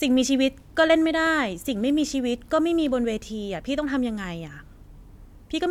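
Listening closely to the speech, nothing stood out as a technical problem at any point.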